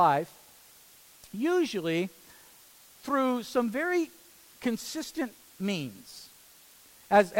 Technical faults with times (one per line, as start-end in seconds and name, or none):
0.00-7.40 low bit depth with dither